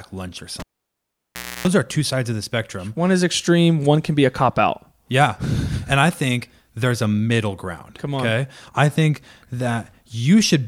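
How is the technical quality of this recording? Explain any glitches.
One glitch interrupts the speech. Cable pulled and plugged in, 0.60 to 1.68 s: the live lead is pulled with a pop, leaving 1.03 s of near silence. Then 0.30 s of 60 Hz mains buzz comes in as only the tip touches, and a second pop marks the sound's return.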